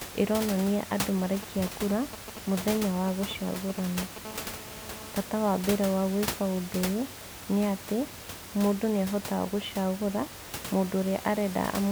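Just after "ĩronania andũ", from 1.34 to 4.18 s, GSM signalling bursts break in. A nearby 2G phone is signalling, and the audio circuit rectifies its radio pulses. The result is a galloping pattern of short 217 Hz buzzes, roughly 10 dB below the speech.

From 4.25 to 5.12 s, a GSM phone buzz follows. The phone is now in a call, transmitting steadily 217 times a second. The rectified pulses form a hard, raspy 217 Hz buzz full of harmonics, about 18 dB below the speech and unrelated to it.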